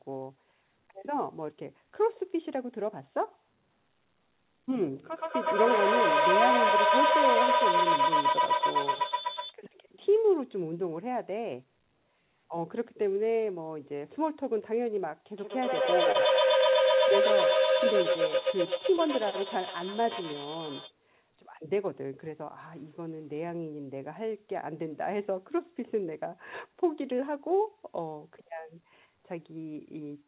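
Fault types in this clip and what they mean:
Feedback howl: Sound loops between devices and gains level each trip. Here it builds to a tone near 4 kHz, pulsing roughly every tenth of a second, about 8 dB above speech.
Short concealed packet loss: About 20 ms of audio never arrived, and the receiver continued the previous sound to cover it. Brief smears occur at 16.12 and 18.97 s.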